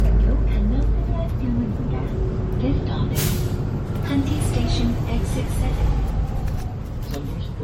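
Across the whole recording the everyday sounds carry a swirling, watery smear, with a hollow, phasey quality and softened, blurred attacks; the top end stops cleanly at 16.6 kHz. This is generation loss, likely from the audio being decoded and re-encoded as MP3 about five times, at rates fitting roughly 62 kbit/s. Each pass quantised afresh on a shifted frame grid, so the artefacts stacked beyond what one encode at that rate would leave.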